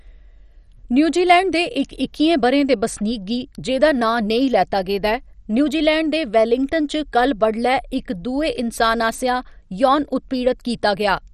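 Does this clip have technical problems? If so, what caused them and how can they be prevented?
Yes. Throughout the speech there's heavy MP2 compression damage: a dull, gurgling, granular texture with nothing above about 13.9 kHz, likely from a low bitrate starving Layer II's sub-bands, which fits something near 56 kbps. Encoding at a higher bitrate would avoid it.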